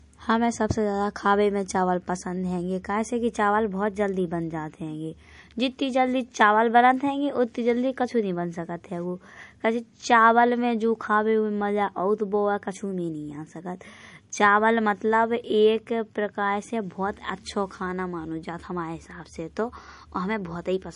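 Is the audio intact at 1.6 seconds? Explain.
No. At 1.6 s, as throughout the clip, the speech sounds watery and swirly with nothing above 10.6 kHz, likely MP3 compression starved of bits, which fits roughly 40 kbps.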